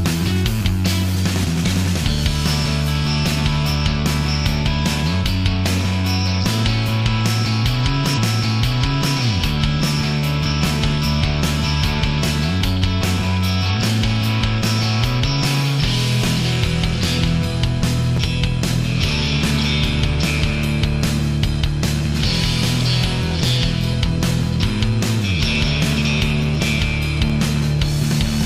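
At 1.42 to 1.44 s and again at 18.17 to 18.19 s, a brief jumbled flicker marks chunks out of order. A 10 ms chunk arrived one slot late and played after its successor, leaving three hard joins. From 8.13 to 9.1 s, just under a second of audio plays twice, with a small blip at the jump back. This is a stream segment repeated: the same segment was queued twice, adding about 975 ms. From 22.94 to 28.29 s, evenly spaced ticks sound every 0.125 s, around forty in all. These are periodic USB or driver dropouts, where a blocking background task made the stream skip a fraction of a millisecond each time.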